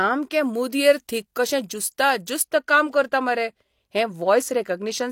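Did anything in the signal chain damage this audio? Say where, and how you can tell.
Yes, pre-emphasis left on from 0.42 to 2.42 s, just before "काम करता": the treble boost added for recording or transmission, a 50 µs FM curve, was never undone by de-emphasis, lifting 10 kHz about 10 dB over 1 kHz. It sounds thin and sibilant, and a spectrogram shows brighter upper bands across that span.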